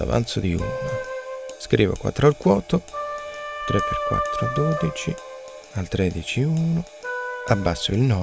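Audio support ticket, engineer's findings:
No audible faults found.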